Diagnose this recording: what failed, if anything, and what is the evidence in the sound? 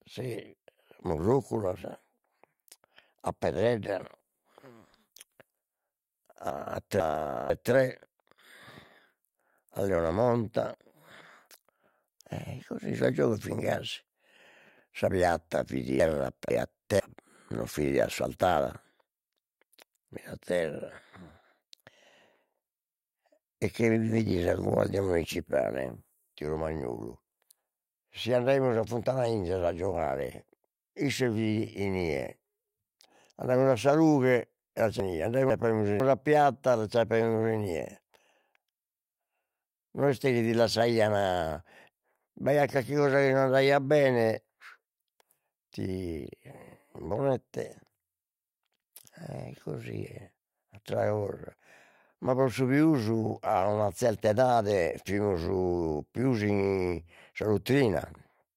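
Chunks out of order at 6.5–7.5 s, 16.0–17.0 s and 35.0–36.0 s, at the buffer or network stage. In each span, a 500 ms block of speech arrives one chunk late and plays after its successor, so the speech jumbles briefly, with three hard joins.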